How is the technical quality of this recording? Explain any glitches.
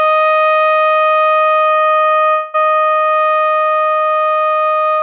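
The recording has two network glitches in the music, one straight after the other, heard through a narrowband call path with nothing above 4 kHz, consistent with G.711 A-law at 64 kbps.

From 1.84 to 2.30 s, repeated packet loss causes six short gaps, the longest 40 ms, each patched by stretching prior sound. About a third of that stretch is concealed, and it sounds choppy.

From 2.30 to 2.56 s, about 0.24 s of audio is replaced by a fading buzz or hiss continuing the last sound, with no silence, likely a long network dropout that the receiver concealed.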